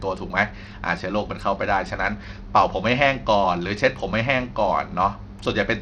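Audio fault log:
Throughout, likely Bluetooth SBC compression: the speech has a dulled, flickering top end, with gritty noise and aliasing plainly audible. The weak upper sub-bands get few bits and the rest are coarsely quantised, which fits a low bitrate near 80 kbps.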